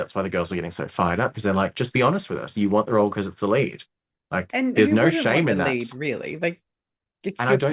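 A speech recording, and nothing is technically wrong with it.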